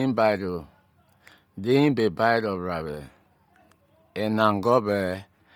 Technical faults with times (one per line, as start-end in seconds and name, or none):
0.00-5.55 Bluetooth LC3 compression